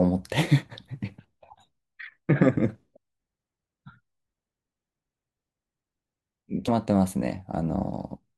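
Speech jumps forward at 2.95, 6.67 and 7.95 s. These are compressed frames skipped: whole codec frames went missing or were rejected as damaged, dropping roughly 150, 40 and 10 ms of audio.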